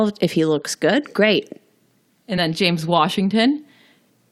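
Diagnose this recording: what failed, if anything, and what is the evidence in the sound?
A codec-stage failure: compressed frames skipped at 2.37 s, where the audio jumps ahead by about one 20 ms frame. On a spectrogram, harmonic tracks step abruptly.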